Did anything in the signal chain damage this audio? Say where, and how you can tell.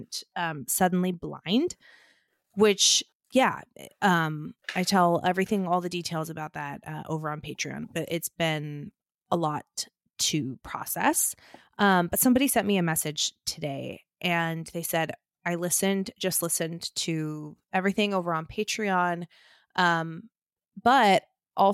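No, nothing in the signal chain audibly damaged this speech recording. No stage, from capture through to playback, leaves any trace that can be heard.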